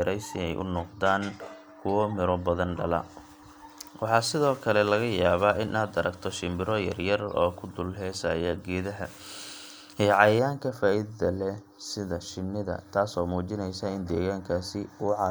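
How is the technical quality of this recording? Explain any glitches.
One fault mars the recording near the end. Channel delay (comb filtering) runs from 10.39 s to the end. One channel lags by around a fifth of a millisecond, so the mono sum cancels from about 3 kHz upward at regular spacing, leaving the speech hollow and phasey.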